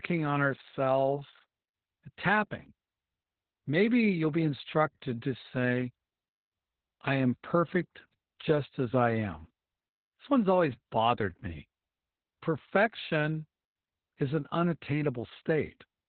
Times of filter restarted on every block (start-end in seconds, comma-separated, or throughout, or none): none